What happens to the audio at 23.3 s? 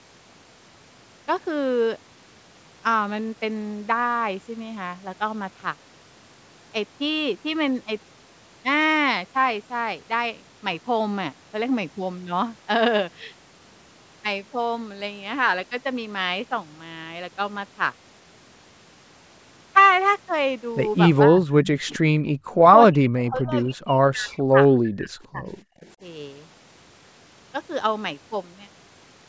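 Around 23.3 s the sound dips sharply and breaks up in pieces, with the deepest drops falling by around 35 dB, about two seconds lost in total across the span from 22.75 to 25.86 s. This is speech suppressed in double talk. The likely cause is that both sides spoke at once, and the echo canceller, unable to tell its own talker from the loudspeaker echo, turned everything down together.

Inside that span, from 23.23 to 23.29 s, a brief, very faint copy of the voice slips through, trailing the original by 263 ms and sitting far below the main sound. This is an echo leak. One side was likely playing the call over a loudspeaker, and its echo canceller failed to remove this short scrap of what its microphone picked up, so it was sent back down the line.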